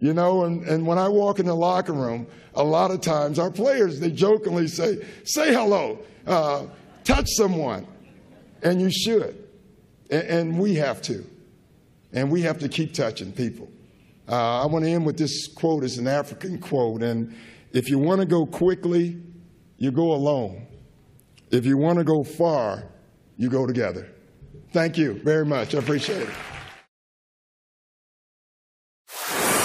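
Nothing in the audio stood out as a technical fault on listening.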